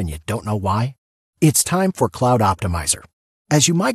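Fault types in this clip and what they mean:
No technical faults can be heard in this speech clip. Nothing in the audio calls for a fault entry.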